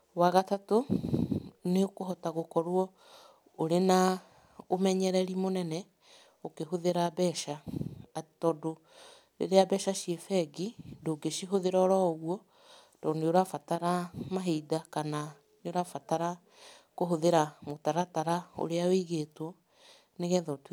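Nothing stood out on listening to this speech recording.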